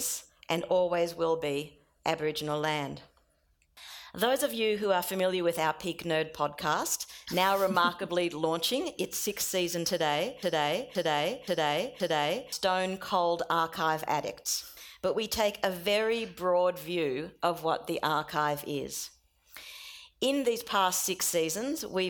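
At 10.43 s the audio falls into a broken-record loop: a fragment about 0.52 s long plays four times back to back, exactly identical each pass, until normal playback resumes at 12.52 s. The likely cause is a player, encoder or stream stalling and resending the last fragment it held, so the material that belonged in those two seconds is lost. Unlike an echo or a short buffer stutter, the repeats neither fade nor overlap, and each spans about half a second.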